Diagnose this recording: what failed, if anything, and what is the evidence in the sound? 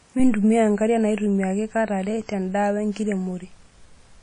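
WMA compression, throughout the speech: a codec-stage fault. Nothing survives above about 10.1 kHz, and there is plainly audible ringing, washy smearing and hiss that breathes with the signal. This is likely long-block transform quantisation spreading noise, which fits a low bitrate around 32 kbps.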